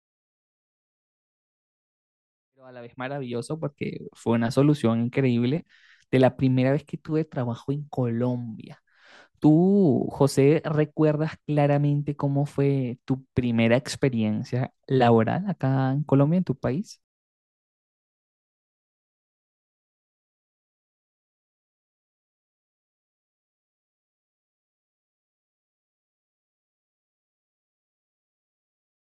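No technical faults are audible.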